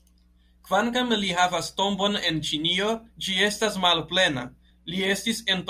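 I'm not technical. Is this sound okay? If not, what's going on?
Yes, this sound is fine.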